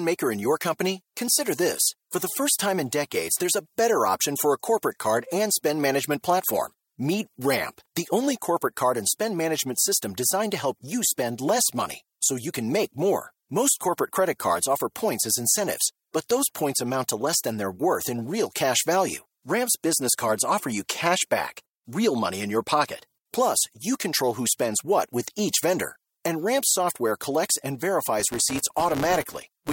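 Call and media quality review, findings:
Filter restarted on every block, 28.20 s to clip end at 29.72 s, after "software collects and". Symptom: steady buzz at 172 Hz under the speech, rising and falling with level. Probable component: block-based filter stage. Mechanism: state cleared each block, so every block opens with a small transient. Rate fits a 256-sample block.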